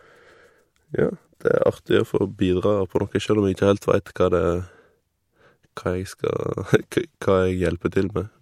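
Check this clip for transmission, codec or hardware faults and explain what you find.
Two pre-echo events stand out, at 5.76 s and 6.91 s. In each, a short hiss leads a sharp attack by 13 ms and 10 ms respectively, with noise about 13 dB and about 14 dB above the quiet floor, so the onset sounds smeared. The codec spread quantisation noise across the whole transform block, which fits a window of about 26 ms that never switched to short blocks.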